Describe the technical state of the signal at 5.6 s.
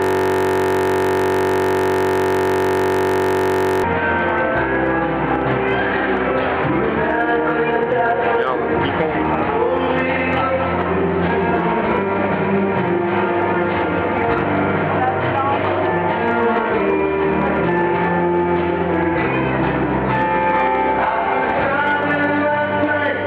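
No fault is audible at 5.6 s, and the signal is intact at that point.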